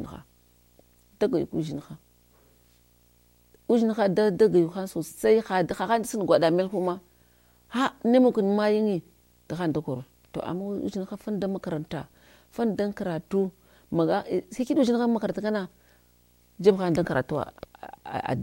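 From start to finish the speech carries a video or display buzz, where a screen or video cable has leaked into the audio path. It is a rasping buzz at 59.94 Hz, the picture's field rate, with hash above it and a thin whine at 15.7 kHz from the line scan, sitting roughly 35 dB under the speech. A spectrogram shows a comb of harmonics stacked on 59.94 Hz plus a steady line at 15.7 kHz.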